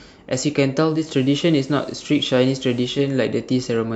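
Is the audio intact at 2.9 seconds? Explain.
No. From 0.81 to 3.15 s the radio is in digital radio blending to analogue: it lost the digital stream and cross-faded over 312 ms to the FM broadcast. Hiss sits roughly 30 dB under the signal, raising the spectrogram's noise floor, with an approximately 1 dB waveform level step.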